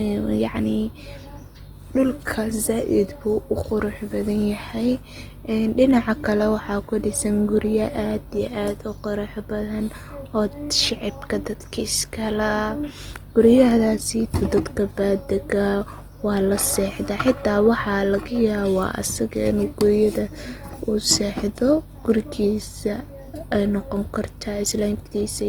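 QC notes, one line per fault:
Throughout, Opus compression: speech sounds rough and grainy, with content reaching 20.2 kHz; likely a music-mode encoder filling starved bands with noise, fitting 24 kbps.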